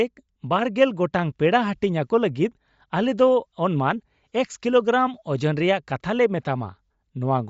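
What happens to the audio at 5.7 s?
At 5.7 s the speech carries the same damage it has from start to finish. Nothing is heard above about 7.7 kHz, and the top of the band sounds breathy and grainy. This is likely Bluetooth LC3 compression. The codec codes the sound in short transform frames, about 10 ms here. At a low rate, near 32 kbps by the sound, it drops the upper spectrum and fills parts with shaped noise. The damage is plainly audible.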